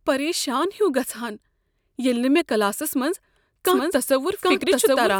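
This speech clip has a doubled audio track from 3.66 s, just after "نہٕ مےٚ کلاسس منٛز", to the end: a copy at about equal level trails by roughly 0.7 s, likely a second capture path. A spectrogram shows the full-band pattern repeated, starting abruptly, with no decay tail.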